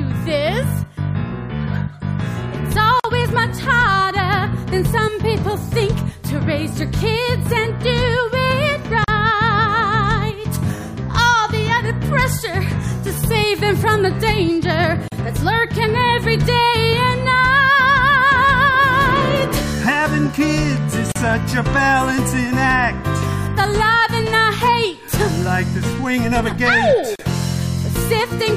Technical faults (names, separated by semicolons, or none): gap at a join of encoded pieces